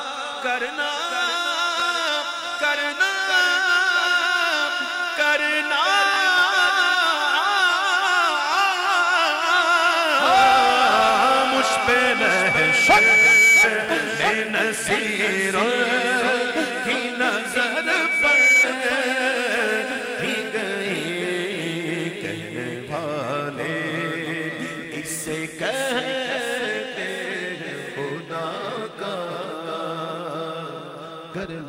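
Two brief stutters, at 1.80–1.82 s and 6.14–6.16 s, sound like a tiny click where a short slice of audio plays twice with hard joins. This is a repeated buffer: fresh audio arrived late, so the last block, which fits a 20 ms buffer, was replayed. A thin, piercing 2.3 kHz tone then swells from 11.15 to 13.74 s, climbing over roughly two seconds, and again from 17.39 to 18.68 s, rising within about a second, ending well above the program level. That is loudspeaker feedback squeal, where a microphone hears the speaker it drives and the loop gain at 2.3 kHz exceeds unity.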